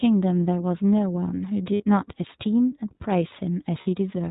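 The whole speech clip carries iLBC codec coloring. Nothing above 4 kHz survives, and the voice is clear but plainly rough and synthetic, which fits the 15.2 kbps mode with 20 ms frames. Unlike a simple low-pass, it adds a synthetic roughness.

From 1.74 to 1.84 s and again from 3.82 to 3.88 s, lost iLBC frames leave gaps of about 60 ms and 40 ms, which fits three and two missing 20 ms frames. The decoder fills each gap by repeating the last pitch cycle mixed with noise, so it sounds like a held, breathy vowel rather than silence or a click. Speech is normal again immediately afterward.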